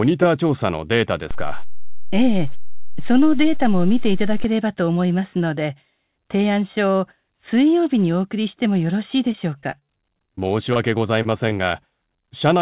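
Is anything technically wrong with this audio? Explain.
Yes. Several faults are audible.

A DC step runs from 1.31 to 4.44 s. The waveform's zero line shifts abruptly. Each shift is heard as a low thump, while the sound continues unchanged.

Repeated packet loss (robotic sound) occurs from 9.32 to 9.90 s and again from 10.26 to 10.77 s. Packets went missing in quick succession, seven holes then four, none longer than 26 ms. Each was patched by extending the previous sound. The result is choppy, with pieces missing.

A jitter buffer slow-down overlaps, from 9.84 to 10.41 s. The receiver repeated short stretches to rebuild its reserve, adding 38 ms. Playback drops to 94 percent speed at unchanged pitch, sounding slightly drawn out.

A short stall from a late packet happens at 11.22 s. The buffer ran dry, and the last sound was held 26 ms until the packet arrived. Nothing is lost, but there is a brief hold with a faint buzz or dip.

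Short concealed packet loss occurs at 11.49 s (20 ms) and at 12.21 s (15 ms). Missing audio was filled by continuing the prior sound and blending back in. Each gives a brief smear or wobble.

The call path, consistent with G.711 A-law at 64 kbps, has nothing above 4 kHz. This makes the sound band-limited and narrow.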